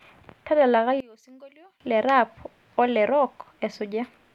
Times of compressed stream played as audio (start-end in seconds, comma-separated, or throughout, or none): none